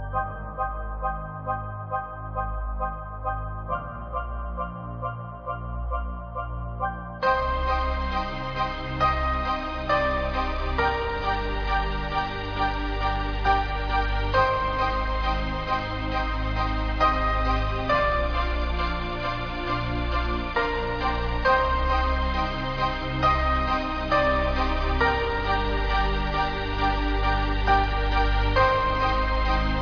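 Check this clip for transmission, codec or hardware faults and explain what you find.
No transmission, codec or hardware faults can be heard anywhere in the clip. Nothing in the audio calls for a fault explanation.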